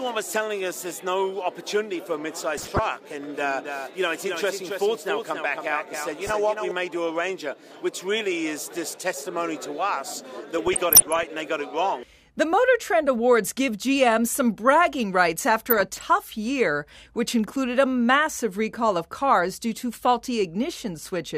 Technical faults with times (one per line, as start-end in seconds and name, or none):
2.57-2.79 DAB burbling
3.23-6.71 doubled audio track
6.12-6.34 DAB burbling
10.59-11.23 DAB burbling
15.70-16.03 DAB burbling